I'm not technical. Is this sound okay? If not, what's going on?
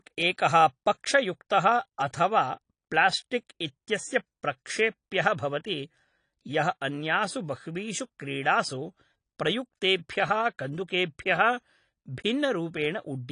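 No. Throughout, the speech sounds dull and plainly swirly, with nothing above 10.2 kHz, likely from heavy AAC compression. That swirling texture distinguishes it from simple muffling.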